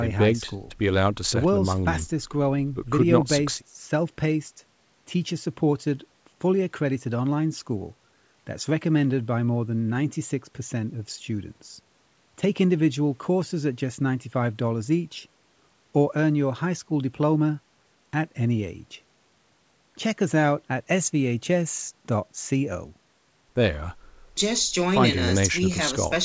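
Nothing goes wrong anywhere in this speech; it just sounds like an ordinary call, with the microphone processing and the WebRTC call path doing their normal jobs and leaving nothing above 8 kHz, which fits a G.722 link at 64 kbps.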